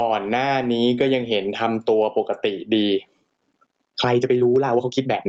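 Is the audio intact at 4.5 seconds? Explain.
No. At 4.5 seconds the audio sits inside a time-stretched section running from 2.79 s to the end. It is sped up about 1.53 times at unchanged pitch, likely by dropping short pieces, so it sounds rushed, with visible splices and compressed spacing in the waveform. Gain pumping also runs throughout, likely from a limiter clamping excessive gain, with swings of roughly 25 dB. Loud and soft parts end up closer in level, showing as a flattened waveform envelope.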